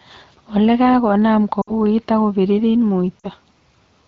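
Lost AMR speech frames at 1.61 to 1.72 s and 3.19 to 3.26 s: corrupted frames on this wideband call were replaced by the decoder's guess from the last good pitch and vocal tract settings at falling gain. The speech briefly drops to near silence and comes back weak or rough for a moment, which fits about three and then two missing 20 ms frames.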